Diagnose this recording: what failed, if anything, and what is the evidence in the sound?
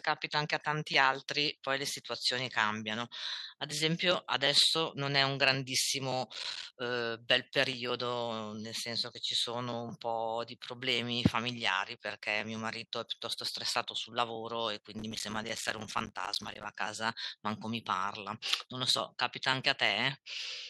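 Processor overload crackle appears twice, at 6.33 to 6.71 s and again at 14.99 to 16.70 s. The stage is the driver and buffer path. Both stretches carry a gritty, tearing crackle over the speech. Each tick is a tiny hole of silence with hard edges. The spacing points to small buffers of roughly 5 ms. The processor missed many deadlines in a row, dozens in the first burst and far more in the second. The crackle stops once the load clears.

Microphone overload shows at 11.25 to 11.27 s. A harsh, crackling edge lands on a loud peak. The waveform tops are flattened, overshooting the limit by about 5 dB. Roughly a tenth of the samples in that instant are squared off. The likely cause is microphone input gain set too high, which drove the converter past full scale. The stage is the analogue input feeding the converter, where the clipped peaks were captured.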